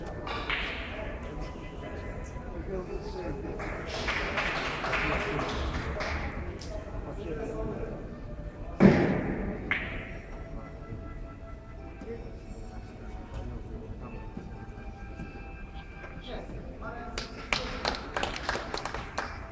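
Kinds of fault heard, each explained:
No faults can be heard.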